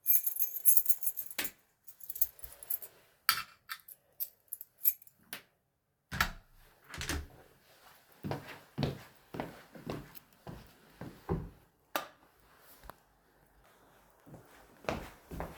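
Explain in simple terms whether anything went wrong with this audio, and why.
Between 11.70 and 12.17 s the receiver's jitter buffer held more audio than it wanted, so it cut out tiny slices, about 40 ms in all, to catch up. This jitter buffer speed-up makes the sound run about 6% fast, slightly hurried, with unchanged pitch.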